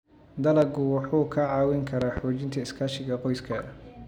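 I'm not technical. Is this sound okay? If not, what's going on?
No. The speech has a loud pop at 0.62 to 0.65 s and a double loud pop from 2.02 to 2.20 s. Each is likely a sudden electrical jolt, from a plug, switch or static, landing on the recording while the speech continues underneath.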